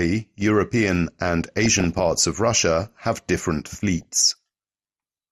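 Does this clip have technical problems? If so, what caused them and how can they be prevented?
Yes. Throughout, the speech sounds dull, with a gurgling, granular edge. This is likely MP2 compression starved of bits, fitting roughly 80 kbps, switching off upper sub-bands and coarsely quantising the rest. A higher bitrate or a more efficient codec would prevent it.

From 1.60 to 2.23 s, and again from 4.01 to 4.37 s just after "have different", short blips of noise break through. This is DAB burbling: a few tenths of a percent of bit errors slipped past error correction and put short blips of noise into individual sub-bands. Better reception, through a stronger signal or a better aerial position, would prevent it.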